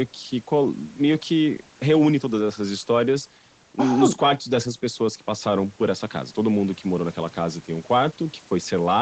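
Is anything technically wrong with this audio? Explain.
No, nothing in this speech recording stood out as a technical problem on listening.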